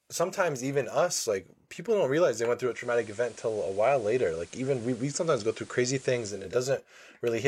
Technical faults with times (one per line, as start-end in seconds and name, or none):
2.60-6.61 digital radio blending to analogue